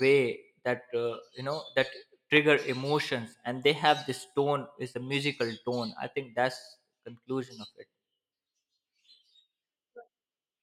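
A loud pop at 2.37 to 2.39 s: one sharp pulse sits on top of the speech, peaking about 10 dB above it, while the speech carries on underneath. A sudden voltage step, likely from a plug, switch, static or driver glitch, entered the signal chain.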